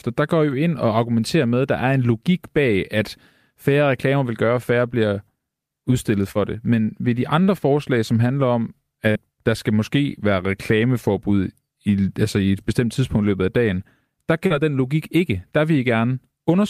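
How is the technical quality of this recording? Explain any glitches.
The recording has four short concealed packet losses, at 6.31, 7.43, 9.11 and 14.47 s. Each time about 40 ms of audio missed the decoder, which extended the preceding sound for 31 to 42 ms and blended back, leaving a brief smear or wobble.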